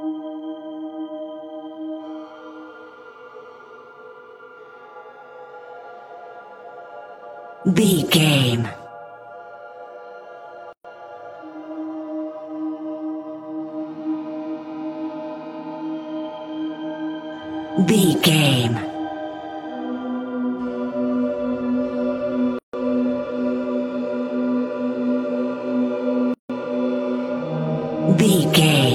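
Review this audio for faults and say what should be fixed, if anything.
Three gaps at joins of encoded pieces break the continuous sound. They fall at 10.73 to 10.85 s (118 ms), 22.59 to 22.73 s (149 ms) and 26.34 to 26.50 s (157 ms). Each is a short silence with smeared edges. The sound then resumes where it stopped. Separately encoded segments were joined untrimmed, so each encoder's start delay and final-frame padding remain. To prevent this, join the uncompressed sources and encode once, or trim encoder delay and padding at every join.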